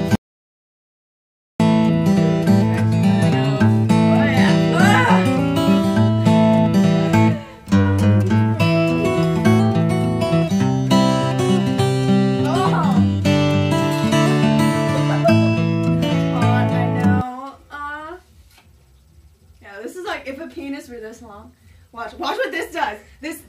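At 0.15 s the sound cuts out abruptly and returns at 1.60 s. That is an audio dropout to silence, about 1.44 s long. The gap holds silence, with no room tone. The input was likely lost while recording continued writing silence.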